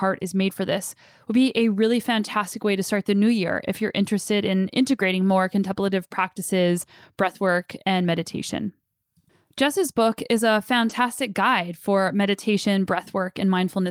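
At 10.89 to 10.91 s, between "book is a" and "guide for meditation", a lost packet was rebuilt from error correction: the following packet carried a low-bitrate copy, which the decoder played. There is no gap, but those 20 ms sound rougher and noisier, which fits a single lost packet.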